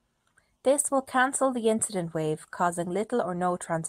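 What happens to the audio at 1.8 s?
Nothing goes wrong at 1.8 s; the speech carries on intact through that moment, with no dropout, click or distortion to be heard.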